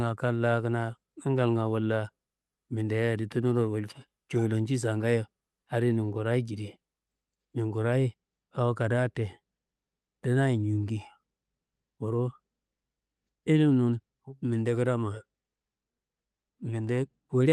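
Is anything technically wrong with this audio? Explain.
No, nothing technically wrong with this speech audio.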